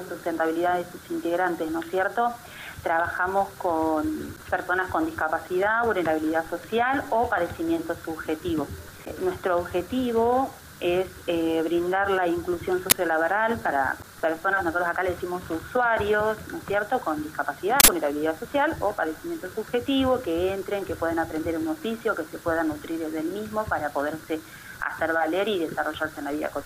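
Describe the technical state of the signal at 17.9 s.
An uninitialised buffer plays from 17.8 to 17.88 s, just before the requested moment. An 80 ms block was sent to output before any audio was written into it, so leftover memory contents were read as samples and heard as a short, loud crack or burst of digital noise.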